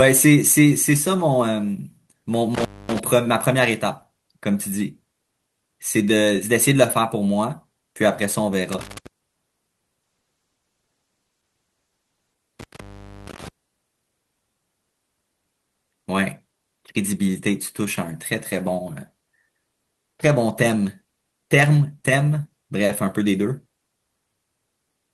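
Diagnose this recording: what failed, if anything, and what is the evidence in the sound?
Intermittent contact in the analogue wiring. The speech drops out three times: 2.55 to 2.99 s with the line open for about 242 ms, 8.72 to 9.07 s open for about 154 ms, and 12.59 to 13.48 s open for about 473 ms. Each gap has crackle at its edges and only faint hiss inside, which is the signature of a loose plug or cable conductor briefly losing contact and then reseating.

Call bitrate drop in the call's encoding chain. From 10.06 to 12.45 s the speech turns coarse and watery, with the top end dulled, and it stays at its worst for about 2.3 s before clearing. The sound points to the encoder being pushed from roughly 32 kbps down to around 14 kbps after the bandwidth estimate fell, so it quantised more roughly and trimmed high frequencies until the rate recovered.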